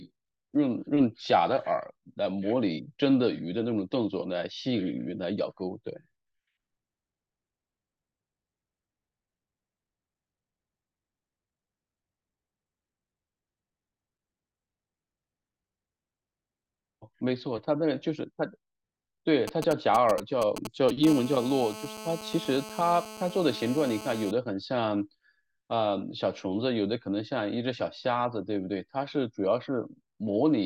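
From 19.48 to 21.05 s, GSM signalling bursts break into the speech. A nearby 2G phone is sending short groups of radio pulses, and the audio circuit rectifies them. They sound like galloping ticks and brief 217 Hz buzzes, only slightly quieter than the speech.

At 21.07 s this turns into a steady GSM phone buzz that lasts until 24.31 s. The phone is now in a call, pulsing 217 times a second. The result is a hard, raspy 217 Hz drone with many harmonics, about 14 dB below the speech.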